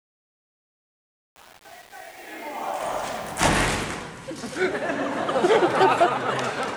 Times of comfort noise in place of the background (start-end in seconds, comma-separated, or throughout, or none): none